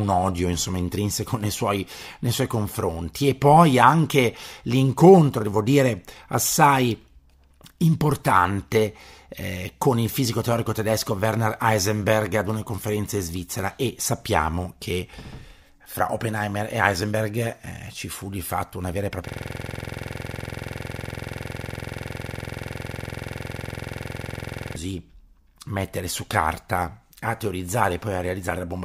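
After "fatto una vera e", from 19.28 to 24.76 s, a system hang loop replays one frozen 46.44 ms buffer, fitting 2048 samples. It sounds like a 21.5 Hz buzz, with identical repeating waveform blocks and evenly spaced vertical spectrogram stripes.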